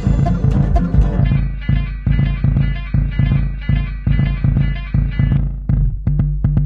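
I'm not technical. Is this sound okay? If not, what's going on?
No. At 1.04 s the music abruptly loses quality and stays degraded to the end: an adaptive stream at a lower bitrate. The player switched to a smaller, cheaper version of the stream, so compression artefacts rise, with no gap or pause.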